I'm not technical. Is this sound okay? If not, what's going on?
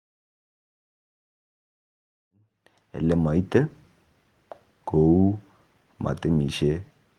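Yes, no faults are audible; the level simply rises gently from around 2.5 s until about 3.49 s, which is a deliberate, smooth fade-in.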